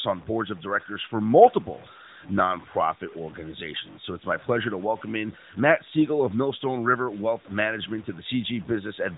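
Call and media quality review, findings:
Low bit depth without dither, whole clip: grainy distortion tracking the speech, quiet tails sputtering out. Likely 7-bit truncation. Spectrogram: signal-following hash, roughly 25 dB down. Waveform: stair-stepped low-level segments.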